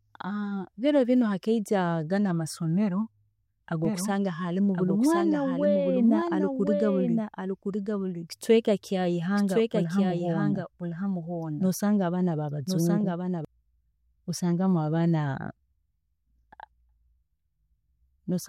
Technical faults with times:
3.85-13.45 doubled audio track

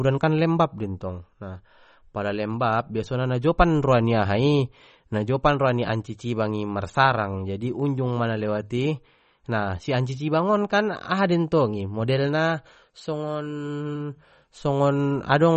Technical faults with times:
0.00-15.56 MP3 compression

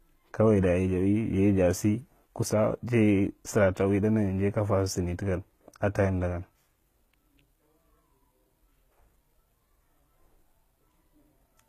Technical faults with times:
0.00-11.68 HE-AAC compression

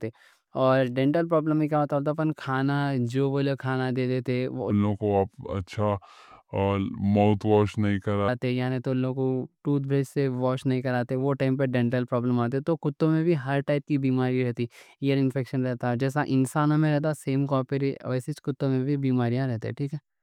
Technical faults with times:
4.70-8.28 section at the wrong speed

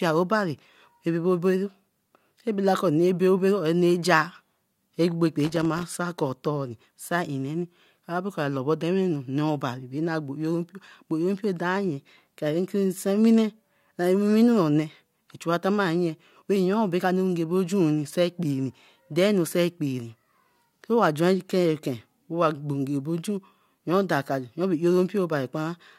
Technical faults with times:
5.43-5.83 loose connector crackle

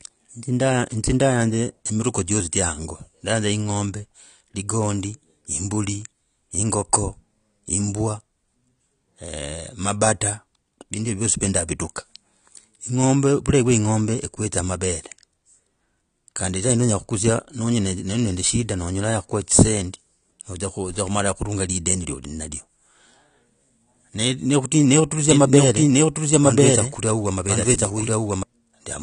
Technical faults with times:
0.00-29.03 AAC compression
25.31-28.43 doubled audio track

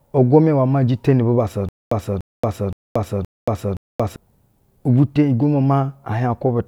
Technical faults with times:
1.69-4.16 stutter with silent gaps

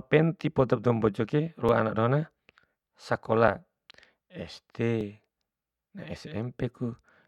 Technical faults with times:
1.69 repeated buffer
3.48 repeated buffer
5.01 repeated buffer

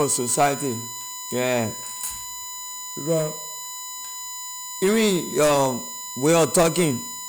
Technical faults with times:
0.00-7.29 USB whine

